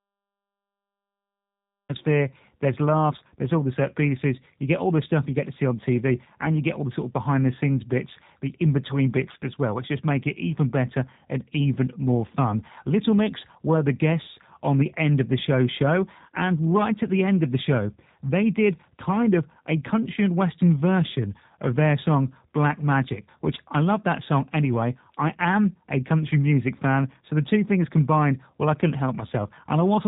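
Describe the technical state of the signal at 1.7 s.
The capture began late, a cut-off start, so from 0 to 1.89 s there is only digital silence. At 1.7 s nothing is heard until speech breaks in abruptly mid-sound at 1.89 s, with no natural attack. The stream also runs through the G.729 codec throughout, which rebuilds speech from a vocal tract model and a few pulses per frame, consistent with an 8 kbit/s VoIP link. Once speech arrives, it is band-limited below 3.8 kHz and sounds plainly rough and synthetic.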